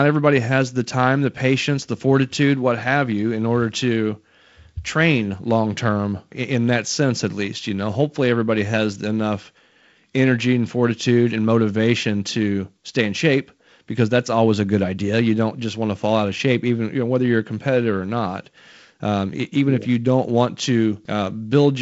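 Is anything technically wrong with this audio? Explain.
No, nothing is technically wrong with this audio; it is speech carried over G.722 wideband telephone coding, which leaves it clear up to about 7.7 kHz with only the light coding texture that this codec at 48 kbit/s brings.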